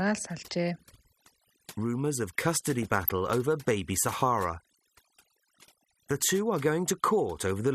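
Throughout, overdone noise removal leaves the background near silent with twinkling specks. Unlike codec damage, it comes from bands being cut wherever they sit near the estimated noise floor. Also throughout, the sound is dull and gurgling, with upper bands flickering on and off, likely MP2 compression at a low rate that fits roughly 80 kbps. Its granular, steady texture differs from the noise removal's twinkling specks in the silences. From 2.80 to 3.12 s, DAB burbling breaks out as short blips of noise. Bit errors that got past error correction put wrong samples into single sub-bands, over a stretch that fits about 16 frames. Unlike the steady MP2 dullness, this is a short, sudden burst.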